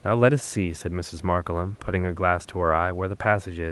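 No technical faults can be heard in the speech. It has the character of a call codec, with the high end stopping at around 12 kHz, and a faint room noise sits about 35 dB below the speech.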